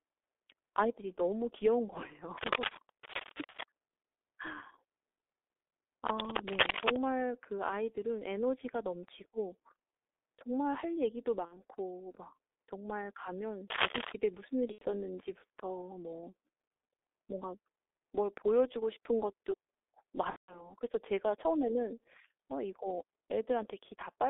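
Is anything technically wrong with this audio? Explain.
Yes. The whole speech clip has passed through the G.723.1 codec. At about 6.3 kbit/s, with a line band of 300 Hz to 3.6 kHz, it sounds muffled and hoarse, and consonants blur.

Cable scratch noise appears from 2.37 to 3.63 s, 6.08 to 7.03 s and 13.70 to 14.12 s. It is dense, uneven rustling, as loud as the speech or slightly louder. A worn, moving contact is the likely cause.

VoIP packet loss, concealed by the speech codec, occurs at 11.45 to 11.63 s, 14.72 to 14.86 s and 20.30 to 20.74 s. The decoder stretches the last sound into a fading buzz. The gaps fit about 60, 90 and 180 ms of lost data.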